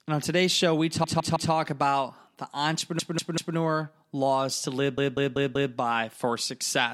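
A stuttering loop breaks into the speech three times. After "on today's show we", a 160 ms block repeats three extra times from 1.04 to 1.52 s. After "about the", a 192 ms block plays three extra times from 2.99 to 3.57 s. After "laws to live", another 192 ms block plays four extra times from 4.98 to 5.74 s. Each is repeated frames: a run of compressed frames was written again, so the decoder replays it, adding about 0.48, 0.58 and 0.77 s.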